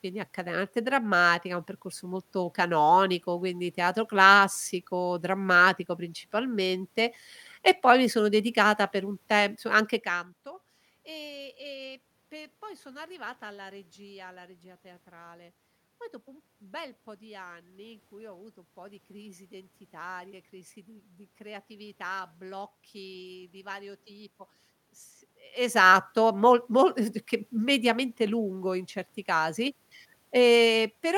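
Nothing stood out on listening to this speech recording; the room noise and the shifts in level around 10 s and 25.5 s, as the talker moves relative to the microphone, belong to the recording itself.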